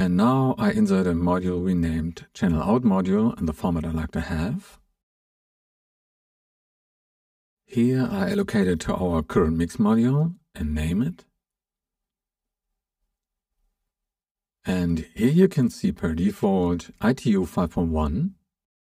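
The whole clip sounds hollow and a bit phasey, like it's coming through a tube, and that's classic channel delay (comb filtering). One channel seems to be running around 5 ms behind the other, and when the two get folded down to mono, whatever they share cancels at regularly spaced frequencies. The first deep notch sits somewhere near 100 Hz, with more following every 200 Hz or so. Those fixed notches are what hollow out the sound.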